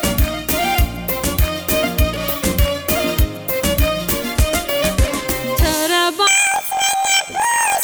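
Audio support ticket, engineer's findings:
Planar audio read as interleaved, 6.27 s to 7.83 s (end). Sound jumps an octave up with a fast flutter near 43 Hz, matching 23.2 ms blocks, which fits 1024-sample planar buffers. Each block's left half then right half plays at double speed. Suspect deinterleave/format-conversion stage.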